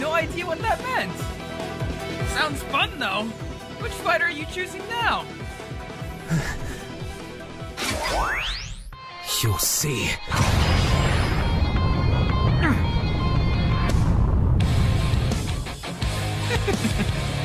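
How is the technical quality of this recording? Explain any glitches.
Nothing in the recording stood out as a technical problem on listening, and there are no glitches to explain.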